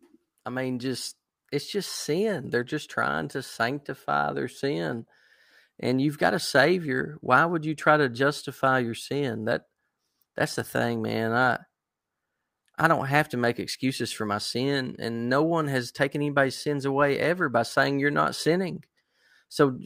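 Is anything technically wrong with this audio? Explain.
No, nothing technically wrong can be heard here.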